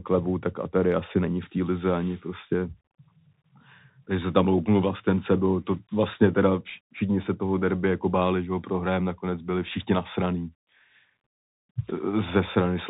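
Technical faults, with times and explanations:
Throughout, Bluetooth CVSD headset codec: the speech is confined to a narrowband headset channel, with nothing above 4 kHz, so it sounds boxy and dull. The coder sends only one up-or-down bit per step and adapts its step size, which fits a 64 kbit/s stream. Sharp, loud high-frequency energy outruns the step and distorts. S sounds come out rough and scratchy, and a grainy hiss sits under the speech. The damage is plainly audible.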